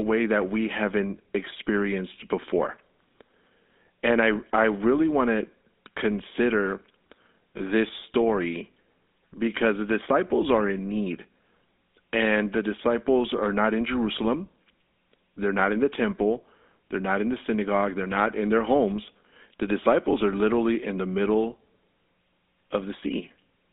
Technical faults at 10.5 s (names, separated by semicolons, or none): GSM full-rate codec